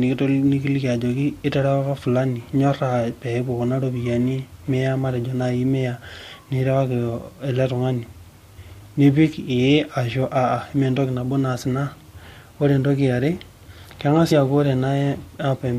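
Compressed frames skipped at 14.3 s: a couple of whole frames of the encoded speech never reach the output, so the audio jumps ahead by roughly 50 ms.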